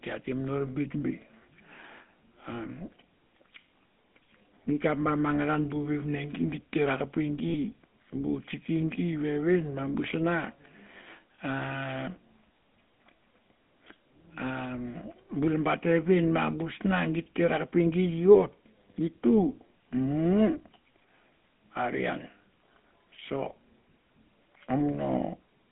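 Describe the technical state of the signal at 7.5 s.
At 7.5 s the signal carries the GSM full-rate codec's damage, as it does across the whole clip. The speech is confined to roughly 200 Hz to 3.5 kHz, with the buzzy, gravelly texture of pulse-driven vocal-tract modelling clearly audible. That character fits 13 kbps full-rate coding.

From 7.48 to 7.56 s there is a run of lost GSM frames. The decoder holds the last good frame's parameters and repeats them. The result is a brief, rough metallic ring rather than new speech, consistent with about three missing 20 ms frames.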